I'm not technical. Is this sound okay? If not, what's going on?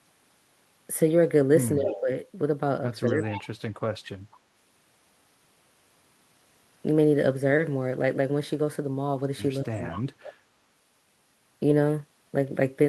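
No, there are two related problems. Around 1.78 to 2.09 s, 3.1 to 3.48 s and 9.72 to 9.95 s the speech dips and partly drops out. That's speech suppressed in double talk, likely because both people talked at once and the echo canceller turned everything down.

Around those moments, at 1.86, 3.06, 9.92 and 10.23 s, you can faintly hear a copy of the speech trailing about a fifth of a second behind. That's echo leak, likely sound from a speakerphone that got back into the call.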